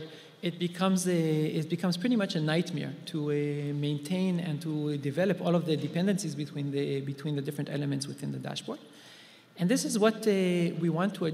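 No technical fault can be heard anywhere in this audio, and the signal holds steady in level, timing and tone throughout.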